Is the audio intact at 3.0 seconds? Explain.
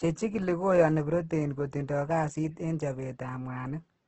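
No. At 3.0 seconds, as across the whole clip, the speech has heavy Opus compression damage, likely from a music-mode encode at a rate that fits about 12 kbps. Starved bands are refilled with noise, so it sounds rough and grainy. A spectrogram shows a hard ceiling near 8.3 kHz.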